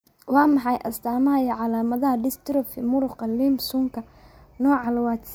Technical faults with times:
none

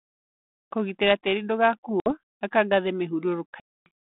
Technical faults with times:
2.00-2.13 packet loss on an ADPCM call
3.60-3.89 packet loss on an ADPCM call

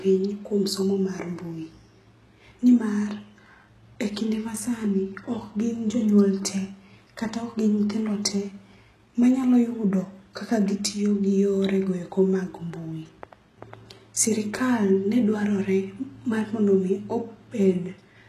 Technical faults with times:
0.00-18.28 HE-AAC compression

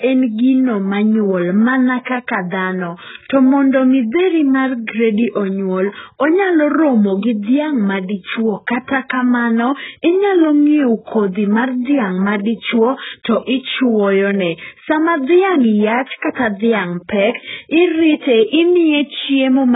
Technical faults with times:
0.00-19.75 AAC compression
2.04-2.07 pre-echo

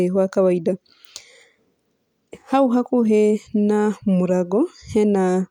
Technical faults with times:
0.00-5.51 crude rate conversion

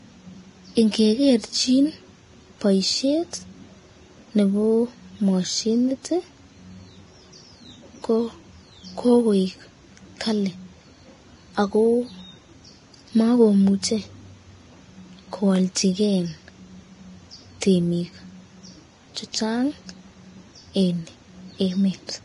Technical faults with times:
0.00-22.24 Vorbis compression
15.56 block of digital silence
17.61 pre-echo

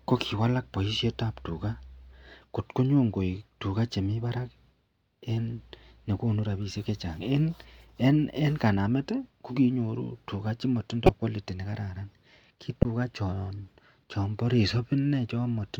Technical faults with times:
11.05-11.09 corrupt frame decoded
12.81-12.85 corrupt frame decoded

